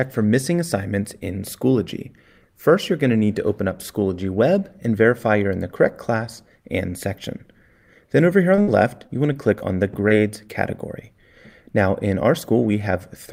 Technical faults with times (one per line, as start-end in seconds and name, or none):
8.55-8.59 short concealed packet loss
8.61-8.69 burst of packet loss
9.07-9.62 short concealed packet loss
10.08-10.12 short concealed packet loss